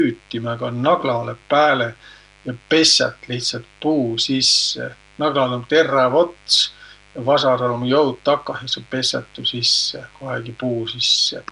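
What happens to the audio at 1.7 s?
At 1.7 s the speech carries a mains buzz. It is not a brief event. It runs through the whole clip. Sharp switching spikes from a dimmer, rectifier or unshielded lead ride on the 50 Hz supply, arriving twice per cycle. Their harmonics stack up from 50 Hz into the kilohertz range. The result is a steady, raspy buzz, sitting roughly 30 dB below the speech.

The speech also sounds rough and smeared, with a hissy halo and an underwater quality. This too lasts the whole clip. The likely cause is Nellymoser compression, the old Flash microphone codec. It codes short blocks with very few bits. Weak bands get nothing and are filled with noise. The damage is plainly audible, which fits a bitrate near 44 kbps. Nothing is present above 10.6 kHz.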